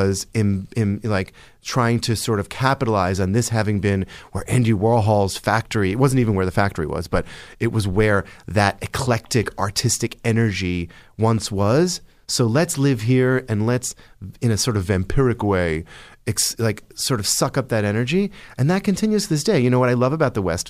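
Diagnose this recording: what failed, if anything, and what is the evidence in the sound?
A drift correction step, most likely in the buffer stage where clock-matching software changed the playback rate at once. Just after "let's in a sort", from 14.76 to 16.27 s, the speech slows by about 5.6% and drops a full semitone, then returns to normal speed and pitch.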